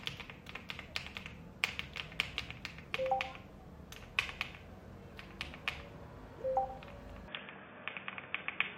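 At 7.28 s the everyday sound abruptly turns dull and boxy, and it stays that way to the end. From there nothing comes through above 3.6 kHz. The overall level shifts by roughly 5 dB, and a faint new background noise appears, well below the sound itself. The change happens with no gap or silence. This points to an input switched to a poorer device, likely a different microphone or a headset's narrowband call profile taking over mid-recording.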